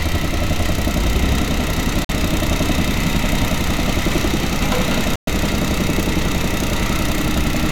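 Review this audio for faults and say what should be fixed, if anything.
Bluetooth dropout at 2.05–2.11 s and 5.16–5.29 s: the sound cuts to silence for about 46 ms and 116 ms, then resumes further along, likely from wireless packets arriving too late. Keeping the playback device close to the headphones, away from interference, and using a larger receive buffer would prevent it.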